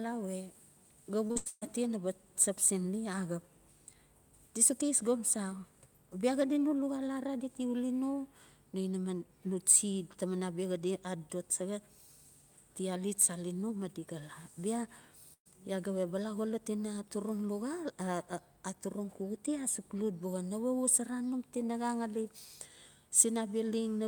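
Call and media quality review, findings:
Repeated packet loss (robotic sound), 1.27–1.63 s: choppy, robotic stretch with four gaps, the longest about 139 ms, roughly 280 ms of audio missing. Jitter buffer/PLC repeating prior frames. Spectrogram: smeared, repeated harmonic blocks covering most of the span.

Burst of packet loss, 15.33–15.47 s: about 120 ms missing, concealed by extending the last sound as it fades, the final 60 ms silent before audio resumes further on. Waveform: decaying envelope, then flat gap. Network/PLC.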